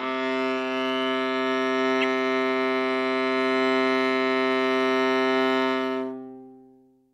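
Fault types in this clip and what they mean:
Corrupt frame decoded: a single compressed frame of the music arrived with damaged bits, and the decoder played it anyway, so misread gains and codes put energy where the music has none. It sounds like a short blip or burst from about 2.01 to 2.05 s, peaking somewhere near -15 dBFS. On a spectrogram it appears as a narrow vertical block of misplaced energy roughly one frame wide; on the waveform, as a brief, out-of-character bump.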